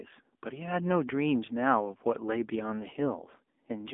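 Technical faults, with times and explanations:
Throughout, AMR narrowband mobile codec: the speech went through a mobile-phone vocal-tract model coding every 20 ms frame with few pulses, which fits a low 7.4 kbps mode. It sounds plainly buzzy and synthetic, squeezed into roughly 250 Hz to 3.5 kHz, with nothing above 3.7 kHz.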